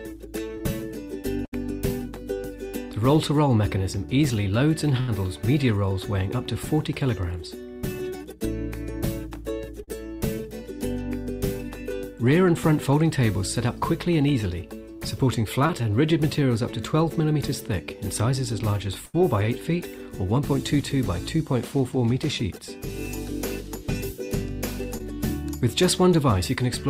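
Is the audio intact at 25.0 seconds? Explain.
No. A short concealed packet loss at 24.98 to 25.01 s left 20 ms undelivered, so the decoder extended the preceding sound, heard as a brief smear.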